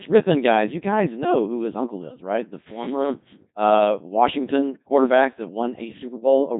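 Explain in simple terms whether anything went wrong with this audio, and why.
The whole clip went through a Codec 2 vocoder. It rebuilds speech from a few measurements, so it sounds robotic and buzzy, with nothing above 3.8 kHz.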